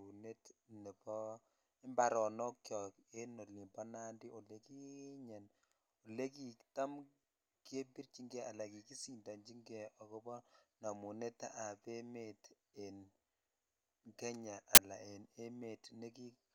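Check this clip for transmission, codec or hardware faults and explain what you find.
One fault is present in the speech. At 14.75 to 14.78 s, just before "ala en", file tags are played as audio: embedded cover-picture data decoded as samples gives a hard-edged burst of very loud white noise.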